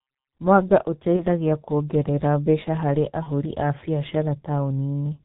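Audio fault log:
Throughout: G.723.1 codec damage, and it's heavy. The speech comes through muffled and hoarse, with nothing above 4 kHz and consonants smeared together. At around 6.3 kbit/s with 30 ms frames, the slow-updating voice model just can't track fast changes.
1.16–1.24 s and 3.23–3.30 s: VoIP packet loss concealed by the speech codec. The first comes just before "kuongerera mbeca harĩ", the second just after it. Each sounds like a single lost 30 ms frame. The decoder fills the gap by extrapolating from the last pitch and filter into a fading buzzy tone or coloured noise, and the voice stays weak or distorted briefly afterward.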